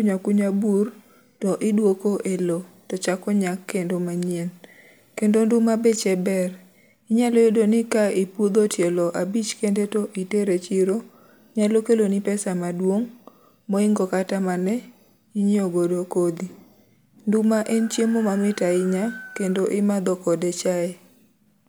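No technical faults can be heard anywhere in the recording.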